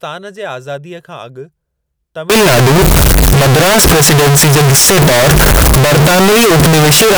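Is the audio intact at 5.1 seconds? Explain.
No. From 2.30 s to the end, very loud, harsh distortion makes quiet passages as loud as the rest, likely from signed and unsigned mixed up in 16-bit samples, so each zero crossing jumps across the whole range. Clipping, by contrast, would only flatten the peaks.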